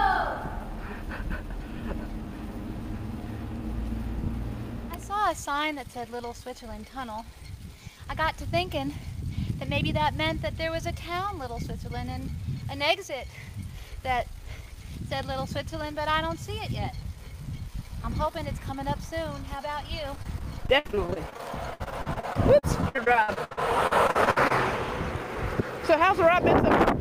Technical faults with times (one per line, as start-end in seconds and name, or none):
20.15-24.52 repeated packet loss (robotic sound)